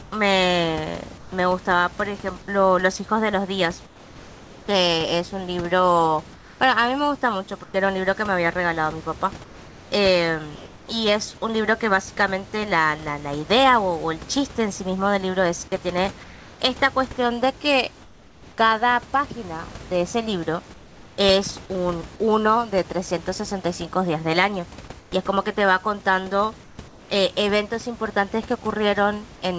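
During pauses at 0.02–1.32, 3.86–10.88, 16.24–18.58, 20.74–21.18 (about 3 dB quieter) and 25.00–27.10 s, the room background turns flat and featureless: comfort noise in place of the background, likely from discontinuous transmission.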